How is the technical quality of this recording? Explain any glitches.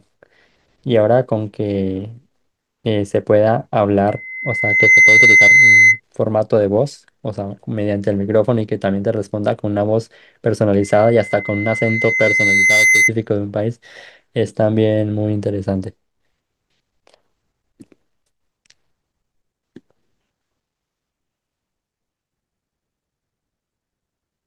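The recording is marred by loudspeaker feedback squeal, which occurs twice: from 4.08 to 6.00 s and from 10.81 to 13.12 s. In each case the microphone was picking up the loudspeaker it was driving, and at 2.1 kHz the loop gain exceeded one, so that frequency fed on itself. The first squeal swells in about a second to roughly 10 dB above the speech. The second builds more slowly, over about two seconds, peaking roughly 5 dB above it.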